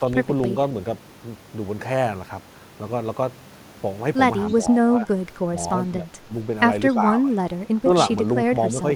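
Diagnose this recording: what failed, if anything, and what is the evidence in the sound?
Speech suppressed in double talk at 4.5–5.08, 5.97–6.31, 6.94–7.02, 7.2–7.5 and 7.84–7.89 s: the speech dips in brief bursts, by up to about 15 dB. This is call processing, likely an echo canceller turning its own talker down while the far end spoke.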